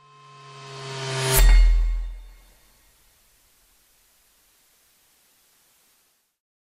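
Digital radio blending to analogue, 1.99–6.42 s: digital reception fails, and a half-second cross-fade to FM brings faint hiss and about a 2 dB level shift.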